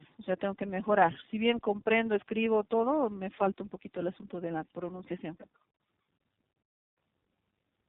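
Tandem speech coding runs throughout: the speech passed through two low-rate speech codecs in succession, which sounds consistent with AMR-NB then iLBC, each recoding the other's errors. It sounds rough, muffled and warbly. A spectrogram shows nothing above 3.8 kHz and smeared, flickering formants.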